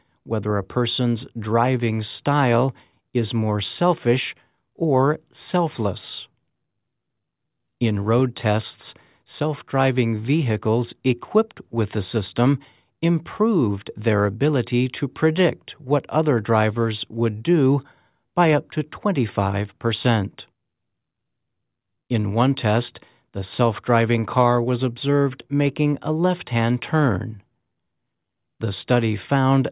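No technical faults can be heard anywhere in the audio, and the signal stays steady and intact for its whole duration.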